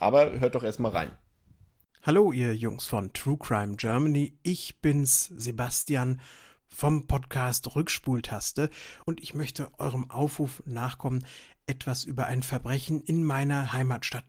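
Just after "hört doch erstmal", at 1.05 s, then at 2.87 s, a 100 ms stretch from 3.75 s, 4.97 s, 5.86 s, a 40 ms stretch at 8.13 s and 12.59 s after "nachkommen etwas über ein", lost packets were rebuilt from error correction. Their low-bitrate backup copies leave no gap, only brief rough, noisy patches. At 5.81 s, a short concealed packet loss also fills about 40 ms by extending the previous sound, giving a smear or wobble rather than grit.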